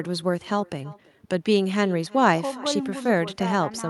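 Echo with no canceller runs throughout this speech clip: every phrase returns roughly a third of a second later, about 23 dB quieter and thinner, because the far end's loudspeaker feeds its microphone and nothing subtracts that path before sending it back.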